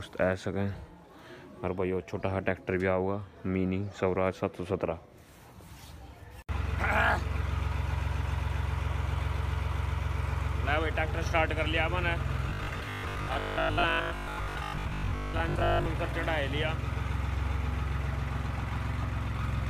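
From 12.50 s to 15.86 s, new audio likely stopped arriving often enough, so the playback side kept repeating the last short buffer instead of going silent. That loop imposes a rigid 50 Hz pitch, which fits a buffer about 20 ms long, and for most of the stretch the repeats stand in for real audio that is skipped. The result is robotic sound from repeated short buffers: a hard, metallic buzz that only loosely tracks the original sound.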